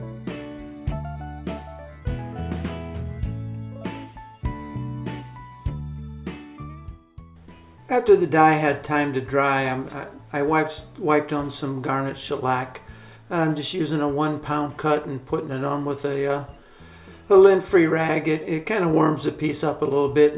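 No faults are audible anywhere in the clip.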